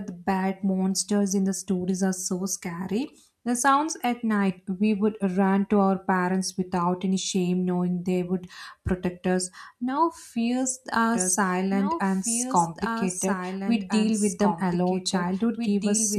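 A doubled audio track begins at 11.14 s, just after "fears are", and runs to the end: a second, full-band copy of the speech trails about two seconds behind, roughly 5 dB quieter, starting abruptly with no decay, likely from a slower duplicate capture path.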